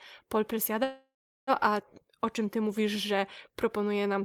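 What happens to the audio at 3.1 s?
At 3.1 s the speech carries on intact, with no audible fault at that moment.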